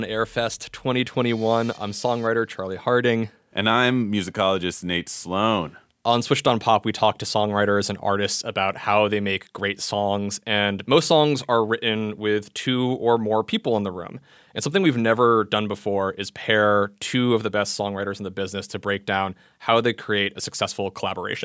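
No technical faults can be heard anywhere in the recording.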